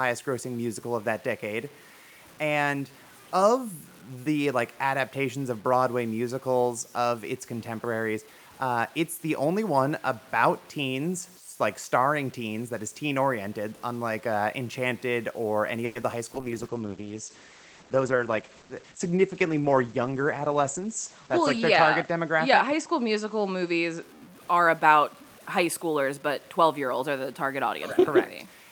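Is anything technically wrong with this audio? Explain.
Yes, there are several faults in this speech, one running through the whole clip and four clustered between about 15.9 and 24.1 s.

Low bit depth without dither affects the whole recording. Quiet passages sound gritty, and the grain tracks the signal and fades into silence. This is likely caused by truncating to roughly 8 bits with no dither, leaving a distortion floor around 30 dB below the speech. On a waveform, low-level sections look stair-stepped. A spectrogram shows a noise haze that rises and falls with the voice.

A call audio freeze runs from 15.85 to 15.97 s, just after "or any". About 100 ms of extended, fading buzz is inserted, and speech resumes where it stopped, now that much later. The likely cause is a jitter buffer that ran empty while packets were delayed. A spectrogram shows a smeared horizontal continuation of the last spectrum.

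Short concealed packet loss occurs at 16.01 to 16.04 s. About 20 ms of audio never arrived in time. The receiver synthesised a brief stand-in and blended back, producing a quick smear or wobble. The waveform shows a short, unnaturally smooth patch, and the spectrogram shows a thin blurred slice.

A call bitrate drop lasts from 16.35 to 24.09 s. The encoder fell from 64 to 11 kbps and held its lowest rate for about 5.1 s. The audio band shrank from 20 kHz to 8 kHz, so speech turns muffled and watery. A spectrogram shows everything above 8 kHz abruptly missing, with coarser, blotchy detail below.

A jitter buffer speed-up runs from 17.90 to 18.94 s. The receiver trimmed small pitch-period chunks to work off excess buffered audio, removing about a tenth of a second. Speech plays at 109% speed with unchanged pitch and sounds hurried. A spectrogram shows syllables compressed in time with harmonics at their normal spacing.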